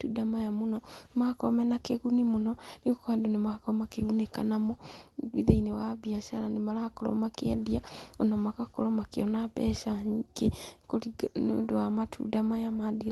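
Nothing goes wrong in this speech at all; it just carries the ordinary sound of a WebRTC call, with the highs easing off somewhere around 12 kHz, which fits an Opus link running at a modest bitrate.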